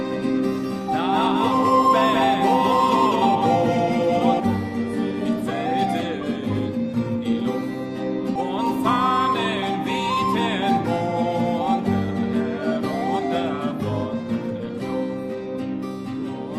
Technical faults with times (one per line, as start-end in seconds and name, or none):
0.00-4.40 doubled audio track
8.35 skip ahead
11.74-12.33 jitter buffer speed-up